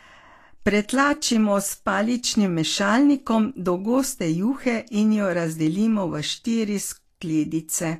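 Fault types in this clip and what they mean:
Vorbis compression: The speech sounds hissy and grainy throughout, with a roughened tone and softened consonant attacks, and nothing survives above 14.2 kHz. This points to a lossy encode, likely Vorbis at a low rate that fits roughly 35 kbps, where treble detail is coarsely quantised into noise of similar energy. A plain low-pass filter would dull the top end cleanly, but here the band below the cut-off fizzes and smears.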